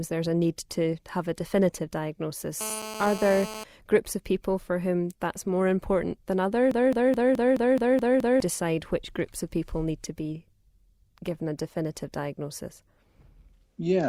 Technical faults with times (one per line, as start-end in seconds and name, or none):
2.61-3.64 GSM phone buzz
6.71-8.40 broken-record loop